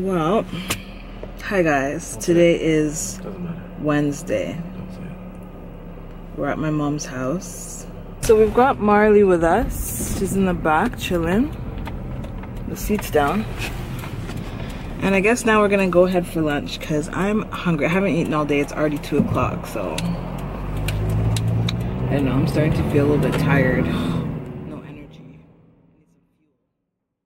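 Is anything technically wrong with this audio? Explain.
No, nothing stood out on listening, and the gradual fade-out over roughly the last three seconds, ending at about 27.3 s, is a smooth editorial fade rather than a problem.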